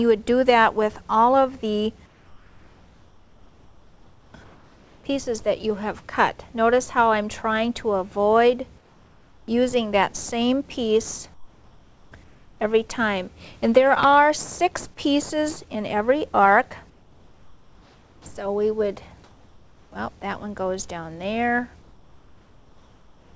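In the pauses between sounds, the real background drops out and a flat, featureless hiss takes its place, about 4 to 5 dB quieter than before. This happens from 2.06 to 5.04 s, 8.78 to 9.48 s, 11.34 to 12.60 s, 16.90 to 18.26 s, 19.24 to 19.92 s, and from 21.82 s to the end. The background sits only about 33 dB below the loudest passages. This is comfort noise in place of the background, likely because the sender stopped transmitting whenever its voice detector judged the input silent. The receiver then filled each gap with synthetic noise that roughly matches the background's spectrum but keeps none of its texture.

At 18.24 s, the sound returning after the fourth pause begins abruptly, with about 20 ms of its soft start missing. The steady hiss runs right up to the attack. This is an onset clipped by the voice detector, likely because the detector was slow to notice the sound had resumed. 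Those first milliseconds were never sent, and comfort noise played in their place.

Across the clip, nothing is heard above 8 kHz, which fits the G.722 call codec.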